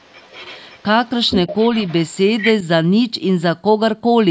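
A second voice runs under the speech from 0.00 to 0.83 s, only faint, then much louder from 1.27 to 2.16 s and in a brief scrap at 2.40 to 2.51 s: the other side's voice leaking through, likely left behind by an incomplete echo canceller. Unlike room reverberation, it does not trail the talker's own sound.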